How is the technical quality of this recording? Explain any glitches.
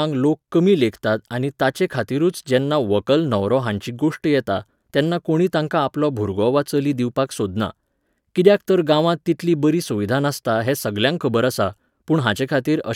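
The recording has no technical glitches to explain, as the signal stays steady and intact throughout with nothing in its path breaking up or going wrong.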